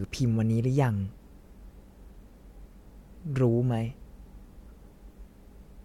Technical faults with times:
none

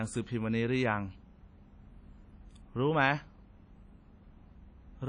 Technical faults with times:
0.00-5.08 WMA compression

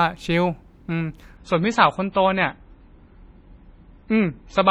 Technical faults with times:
1.37-4.70 adaptive stream at a lower bitrate

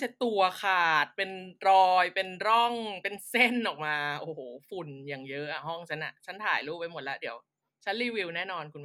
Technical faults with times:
none

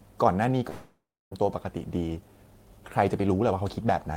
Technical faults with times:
0.69-1.33 long network dropout
1.41-4.11 jitter buffer speed-up

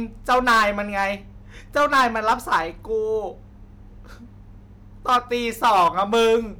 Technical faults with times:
0.29-1.06 hard clipping
1.77-2.61 hard clipping
5.09-5.18 hard clipping
5.64-6.36 hard clipping

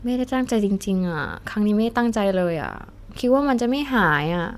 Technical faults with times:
none

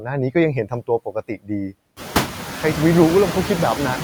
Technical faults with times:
0.00-4.04 noise suppressor artifacts
1.05-1.50 speech cut by the noise suppressor

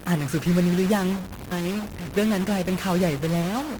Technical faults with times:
0.00-3.79 stuck bit
1.51-1.53 skip ahead
1.61-2.90 jitter buffer speed-up
3.42-3.78 jitter buffer speed-up

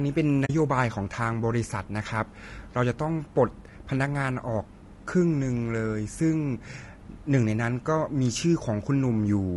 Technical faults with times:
0.00-9.57 low-delay AAC compression
0.45-0.50 AAC frame loss with muting

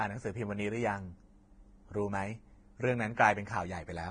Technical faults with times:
0.00-4.10 Vorbis compression

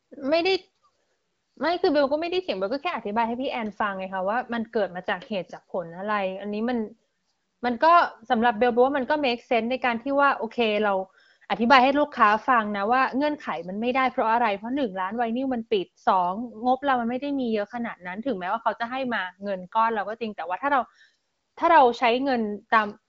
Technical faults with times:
none

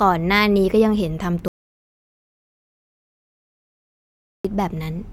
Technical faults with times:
1.48-4.45 audio dropout to silence

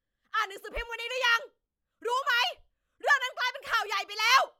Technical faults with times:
none

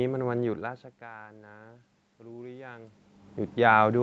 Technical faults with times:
1.00-3.02 automatic gain rising

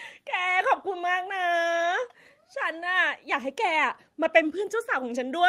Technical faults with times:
none

